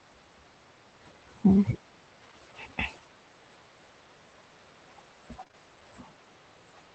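Speech heard through a call codec topped out near 8 kHz suffers short concealed packet loss: three consecutive 20 ms gaps at 5.43, 5.48 and 5.51 s were filled by extrapolating earlier sound, leaving a brief smeared wobble.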